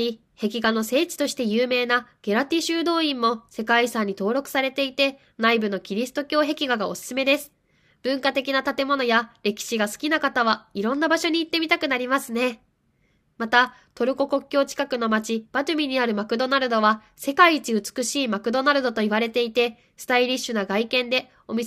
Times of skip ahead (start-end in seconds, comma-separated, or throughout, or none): none